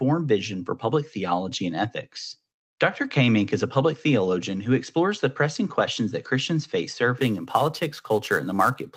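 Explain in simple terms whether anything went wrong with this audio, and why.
Near the end of the clip, from 7.18 s to the finish at about 9 s, the speech picks up a rough, hissy edge. This is sample clock jitter. The clock that times each sample wobbled by around ten millionths of a second. So samples were taken a little early or late. Fast-changing, loud and bright sounds suffer most. The error follows the speech and disappears in pauses. The call-codec sound, topping out near 8 kHz, is expected.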